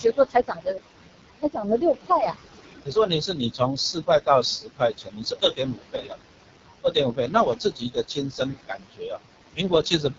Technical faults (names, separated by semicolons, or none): noise suppressor artifacts; AMR wideband (HD Voice) codec; speech cut by the noise suppressor